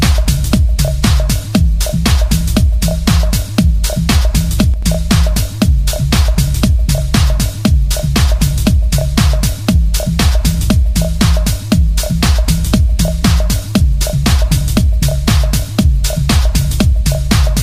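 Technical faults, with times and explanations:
4.74–4.83 s, one channel drops out: a sudden dip of about 6 dB for under a tenth of a second, likely from one stereo channel vanishing before the mono sum.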